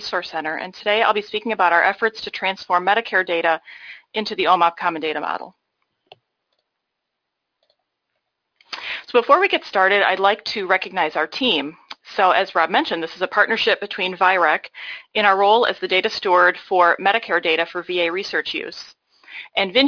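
No technical faults are audible anywhere in the recording.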